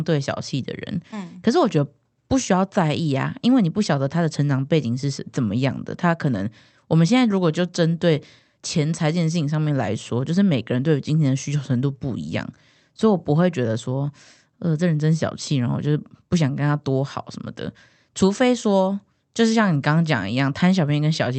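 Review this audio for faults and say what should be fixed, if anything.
No faults, nothing to fix.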